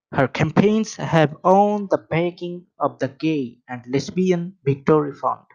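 Hard clipping first appears at 0.20 s as a brief crackle on a speech peak. It returns at 0.60 s, slightly harsher, with the level pushed about 2 dB past the limit. From 1.18 to 1.53 s, just before "the backing of the", the overload is about 1 dB but lasts longer. Each time, the signal exceeded what a stage could pass, and the peaks were cut flat. Those flat tops add high harmonics, heard as crackle on the peaks.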